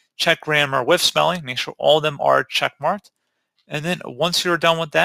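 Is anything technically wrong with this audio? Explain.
No, nothing in this audio points to a technical fault.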